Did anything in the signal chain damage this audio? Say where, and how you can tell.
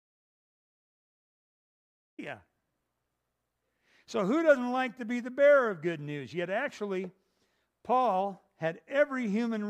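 Yes. The clip has an audio dropout to silence, most likely from the input being lost before the recorder, through a disconnected device, failed link or mute, while zeros kept being written. It opens in silence with no room tone until speech cuts in at 2.19 s.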